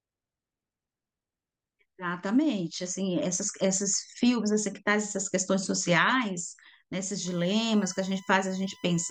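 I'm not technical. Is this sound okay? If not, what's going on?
No. From about 7.25 seconds to the end there's a USB whine, a steady high-pitched tone at 1 kHz, loudest at 2 kHz, sitting quietly under the speech. It's electrical noise from the computer's USB connection leaking into the audio through the power.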